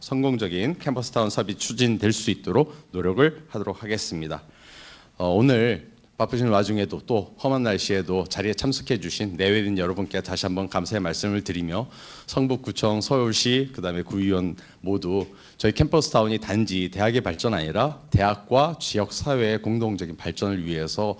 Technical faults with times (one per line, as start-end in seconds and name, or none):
17.34-17.47 short concealed packet loss
17.88-18.10 short concealed packet loss